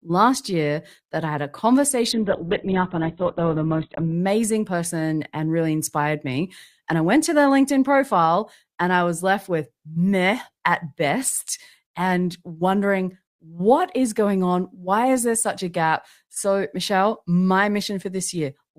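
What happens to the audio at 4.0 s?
The adaptive stream has dropped to a lower bitrate from 2.12 s to 4.12 s, and 4.0 s falls inside it. Nothing above 4.1 kHz remains, so the speech sounds dull, which fits a very low Opus rate near 8 kbit/s. Full quality returns abruptly, with no gap, just before "person and really inspired".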